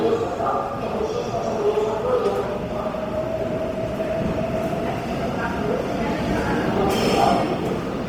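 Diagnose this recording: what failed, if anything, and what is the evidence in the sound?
The codec stage is the likely culprit: lossy Opus compression in its music (CELT) mode, at a rate that fits roughly 24 kbps. Throughout the clip, tonal detail turns grainy and rough as starved bands are refilled with folded or noise-like energy. Full bandwidth is kept, reaching about 20.2 kHz.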